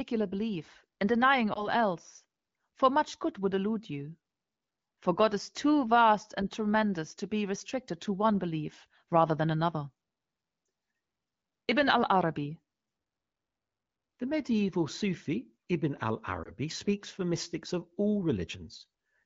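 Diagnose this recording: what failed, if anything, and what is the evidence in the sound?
Lost AMR speech frames on the radio link: brief warbly dips at 1.53–1.69 s after "belief and denying", 10.65–10.67 s, and 16.43–16.51 s before "speaks for mystics of", where the decoder papered over each corrupted frame.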